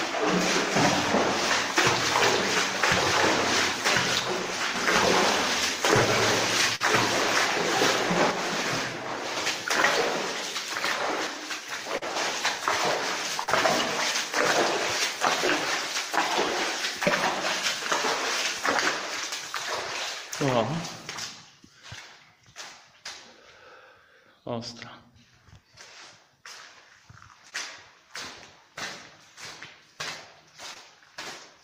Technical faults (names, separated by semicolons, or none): one channel drops out; burst of packet loss; short concealed packet loss